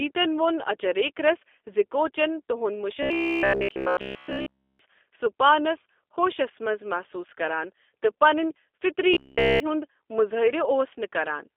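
From start to finish the speech carries the sound of the G.729 codec: nothing reaches above 3.6 kHz, the low end thins below about 300 Hz, and the voice has a plainly rough, slightly synthetic grain, which fits an 8 kbit/s G.729A line. The harshness comes from rebuilding speech out of a vocal tract model plus a sparse set of pulses. That gives a steady grittiness, unlike the muffled smoothness of a simple low-pass filter.

From 3.03 to 4.79 s, and again from 9.14 to 9.60 s, the voice collapses into a rigid metallic buzz at 66.8 Hz: robotic sound from repeated short buffers. Essentially all of the audio in those stretches is the same slice replayed, likely because audio arrived too slowly and the playback filled the gap with its last buffer. The buzz period points to a buffer of about 15 ms. Unlike the codec's constant roughness, this locks onto one fixed pitch and only loosely tracks the speech.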